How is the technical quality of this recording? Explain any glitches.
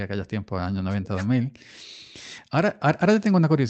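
No glitches to speak of here: the speech comes through a call path with a typical Opus codec, so the top end rolls off around 8 kHz, but nothing drops out or breaks up along the way.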